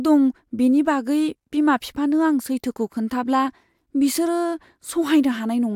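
No technical faults can be heard anywhere in the recording.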